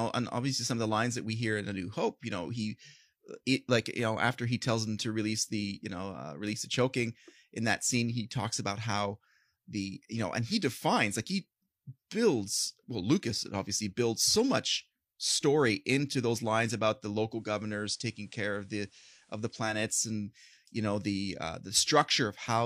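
At 17.29 s, after "those lines about the", digital radio blending to analogue occurs: the receiver loses its digital signal and cross-fades over 245 ms to the FM broadcast, returning at 19.83 s before "and you know the". The speech drops about 2 dB and gains faint hiss.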